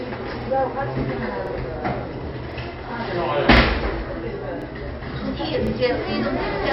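Everyday sound, with a hard treble ceiling: nothing is present above 5.6 kHz, and the remaining band has a plainly audible watery, swirling texture with smeared transients. This is likely MP3 compression at a low rate, consistent with about 32 kbps, where the encoder discards the top band and lets weak spectral lines flicker between frames. Overlapping chunks produce a stutter at 0.42, 1.47, 2.52, 3.57, 4.62 and 5.67 s. At each point a 50 ms stretch plays twice, because the audio was handled in 1 s chunks and each chunk begins 50 ms before the previous one finished, giving a regular repeat every 1.05 s.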